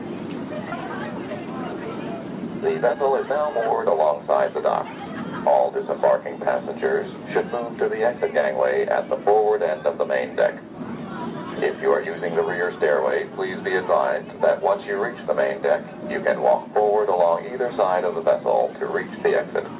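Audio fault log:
0.72–0.74 s, skip ahead: about a second of sound is dropped and playback jumps forward, joining both sides almost directly with no filled gap.
0.82–1.74 s and 2.40–5.71 s, jitter buffer speed-up: the buffer drains excess delay by cutting short pitch-period pieces, so sound runs at 109% and 111% speed with unchanged pitch.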